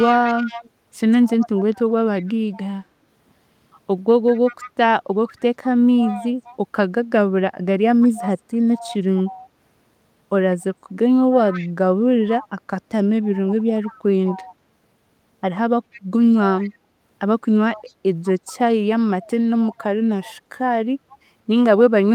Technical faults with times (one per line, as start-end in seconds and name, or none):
0.00-2.59 echo leak
4.27-6.56 echo leak
8.01-9.49 echo leak
10.55-12.47 echo leak
13.87-14.55 echo leak
15.92-16.70 echo leak
17.74-20.33 echo leak